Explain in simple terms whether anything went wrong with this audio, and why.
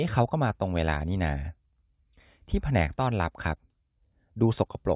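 Listening to the recording, nothing stood out as having gone wrong at any point in the speech.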